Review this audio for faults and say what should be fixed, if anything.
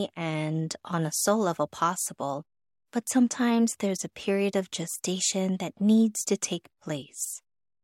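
Nothing in the speech signal needs fixing, since no technical faults can be heard anywhere in the recording.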